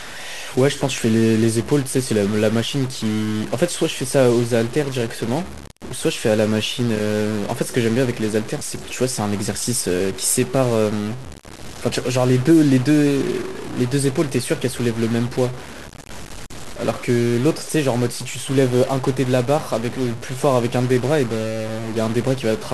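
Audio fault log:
Throughout, stuck bit: harsh, buzzy distortion rides on the speech, and the pauses fill with noise instead of going quiet. The likely cause is one sample bit held at a fixed value, pushing about half of all samples off by a step of around -30 dBFS.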